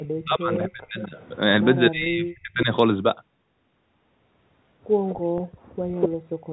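Echo leak first appears at 0.00–0.07 s and returns at 0.99–1.28 s, 5.09–5.18 s and 5.93–6.09 s. Each time, a copy of the speech trails the original by 248 ms. It sits about 20–25 dB below the speech in the first three instances but only about 5 dB below at 5.93 s. This is likely loudspeaker pickup at the far end that its echo canceller did not fully remove.

Speech suppressed in double talk occurs at 0.24–1.14 s and 1.91–2.69 s. Within each span the level dips in patches, by up to roughly 30 dB at the deepest point, across around 0.7 s of audio. The likely cause is an echo canceller treating overlapping talk as echo and attenuating the wanted speech along with it.

Packet loss with pitch repetition falls at 2.04–2.06 s and 5.38–5.40 s. Each gap is about 20 ms, which fits a single lost packet. The receiver bridged each gap by repeating the last pitch period, so each one sounds like a brief, slightly buzzy hold before the speech resumes.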